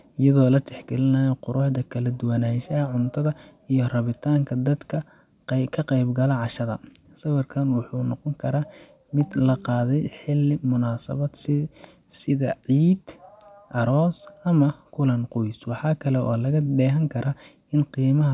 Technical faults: none

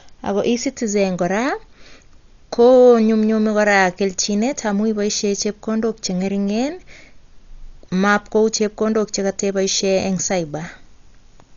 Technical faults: Dolby Digital compression

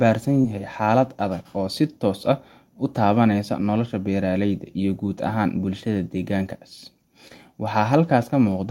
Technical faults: short concealed packet loss

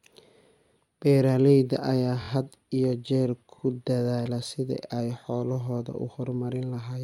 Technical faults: repeated frames

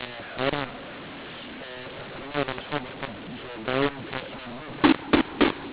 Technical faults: mu-law and A-law mixed up

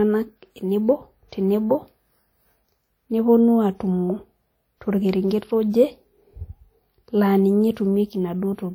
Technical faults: WMA compression

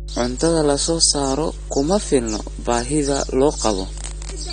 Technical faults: mains hum; AAC compression

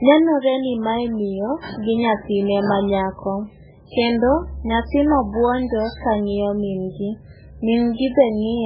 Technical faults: MP3 compression

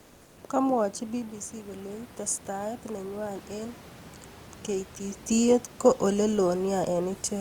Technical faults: comfort noise in place of the background; automatic gain rising

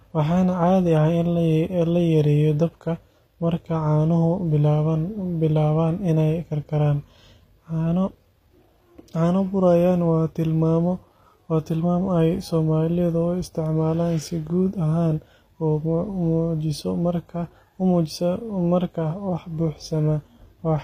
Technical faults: HE-AAC compression

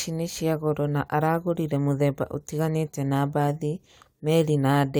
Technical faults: none

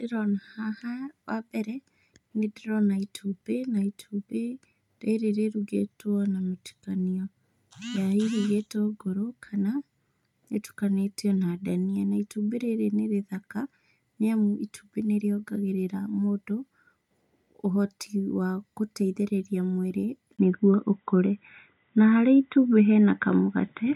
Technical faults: input switched to a poorer device

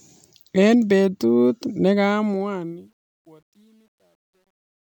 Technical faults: truncation distortion on a fade

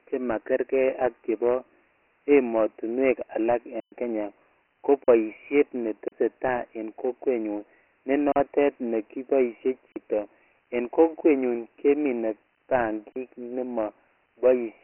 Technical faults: Dialogic VOX ADPCM; block of digital silence

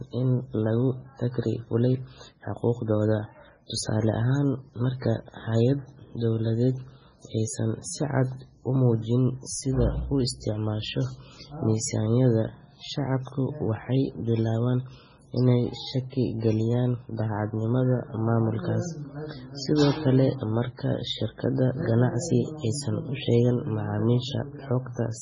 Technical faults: MP3 compression

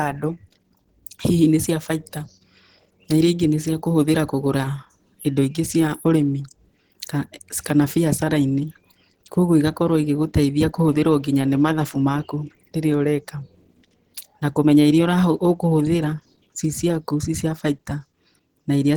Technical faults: Opus compression

